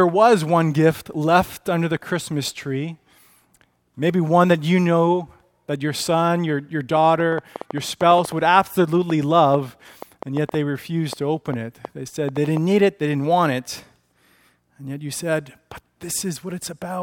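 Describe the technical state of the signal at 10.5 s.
At 10.5 s you're right in the middle of a train of clicks that runs from about 6.97 to 12.58 s. It's roughly thirty similar-shaped pops, arriving unevenly at about 4.5 per second and peaking around 10 dB above the audio, so they tick clearly over the sound and through any gaps too. Something is injecting a short pulse over and over, most likely interference from nearby equipment or a faulty connection or power supply.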